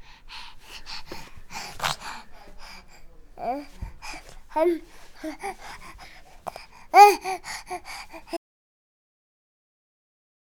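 A recording of sounds that ends in an audio dropout to silence: at 8.37 s the sound cuts off mid-flow and the last 2.1 s are silent with no room tone, most likely because the input signal was lost while recording continued.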